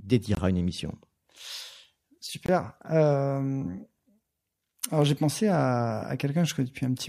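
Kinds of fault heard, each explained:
Block of digital silence: the speech drops out twice, at 0.35 s and 2.46 s, each time into a short hole of about 23 ms of silence, with the sound cutting off and snapping back, since there is no fade at either edge. Both gaps have the same length, which fits a 1024-sample buffer not being filled in time, leaving it blank.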